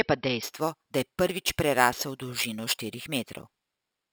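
From 0.43 s to the end, imaging from sample-and-hold upsampling appears. The audio was raised from 12 kHz to 48 kHz by repeating each sample, unfiltered. A mirrored copy of the speech spectrum fills 6 to 12 kHz, about 12 dB down, heard as metallic fizz tracking the speech.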